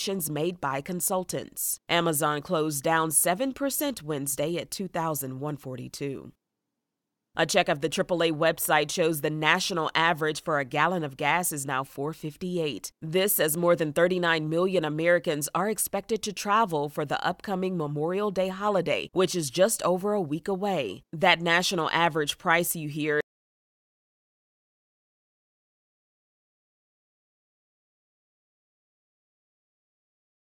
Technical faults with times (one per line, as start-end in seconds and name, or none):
23.21-30.45 audio dropout to silence